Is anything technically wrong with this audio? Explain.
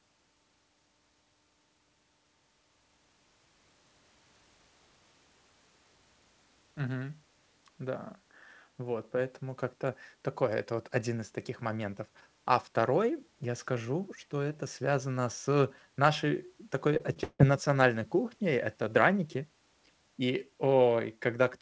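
Yes. From 16.94 to 17.41 s the speech breaks up with repeated packet loss, giving a robotic sound. Four gaps open as packets go missing or arrive too late in quick succession, the longest gap running 157 ms. Each hole is patched by stretching the last received audio, so nearly half of that half-second is concealment rather than real speech. The result is choppy speech with pieces missing. On a waveform the stretch shows truncated, repetitive chunks. A spectrogram shows smeared, frozen harmonics separated by abrupt seams, all capped at 8 kHz by the G.722 call codec.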